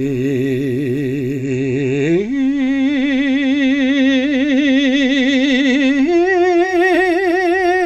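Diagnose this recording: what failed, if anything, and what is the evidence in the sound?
The failure is in reception: digital radio blending to analogue. At 1.32 s the music cross-fades over 161 ms to FM, returning at 6.77 s. Meanwhile level shifts about 1 dB, and hiss sits roughly 40 dB down. That hiss rules out a codec bandwidth drop.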